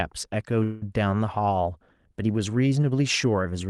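Speech carried over a call link, band-limited near 12 kHz in a way that fits an Opus codec. At 0.63 s the sound stops moving forward. A fading buzz holds in its place until 0.83 s, about 0.18 s of filler. This is a call audio freeze. The likely cause is packets stalling in transit until the jitter buffer emptied. The receiver stretched the last sound to cover the wait. Nothing is lost. The speech resumes where it stopped, just later.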